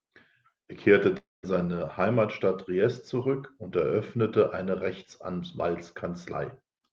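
At 1.17 s the speech breaks off until 1.45 s. The last sound is stretched into a fading buzz, leaving about 200 ms of silence before speech resumes with roughly 260 ms missing. This is likely a long network dropout, with the receiver concealing the lost stretch.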